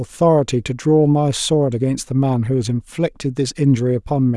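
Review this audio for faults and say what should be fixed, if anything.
Nothing stood out on listening, so there is nothing here that needs fixing.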